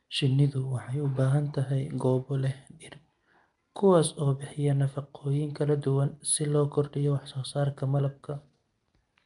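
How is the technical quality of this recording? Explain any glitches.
The recording has plainly audible codec damage throughout, consistent with Nellymoser compression. It runs the whole clip, not as isolated glitches. The speech carries a rough, hissy halo and a smeared, underwater quality, and nothing sounds above about 10.6 kHz. This is likely Nellymoser Asao, Flash's microphone codec, at a rate that fits roughly 44 kbps. With so few bits per sample, weak bands get none and are replaced by noise. A spectrogram would show a hard ceiling near 10.6 kHz and speckled noise patches between harmonics.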